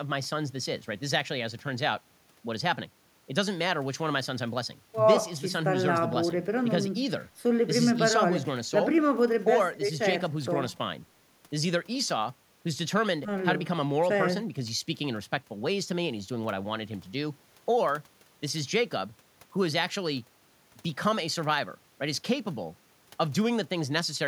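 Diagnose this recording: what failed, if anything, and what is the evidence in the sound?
Nothing failed in this recording.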